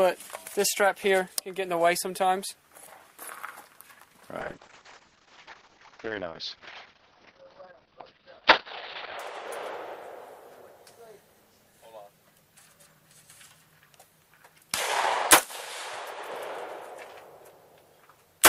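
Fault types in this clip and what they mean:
Call bitrate drop: the encoder was starved of bits after the connection's bandwidth estimate fell, so it coded the signal far more coarsely and discarded its upper spectrum. From 4.41 to 9.25 s the audio band narrows from about 20 kHz to 6 kHz, leaving the sound muffled, rough and watery for roughly 4.8 s. The degree of degradation fits a fall from about 64 kbps to around 7 kbps before recovery.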